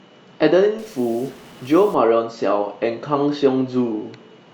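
Speech, turning harsh and buzzy from 0.79 to 1.94 s, likely a stuck bit in the converter or data line, knocking about half the samples off by roughly -40 dBFS.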